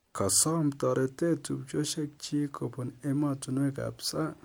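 Nothing technically wrong turns up anywhere in this bit of speech, so there's no fault to point to.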